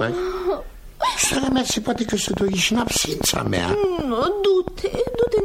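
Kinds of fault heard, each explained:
Train of clicks: A run of near-identical pulses from about 1.24 s to 5.41 s, roughly forty clicks at around 10 per second with uneven spacing, peaking about 15 dB above the audio, likely from interference or a faulty connection or power supply.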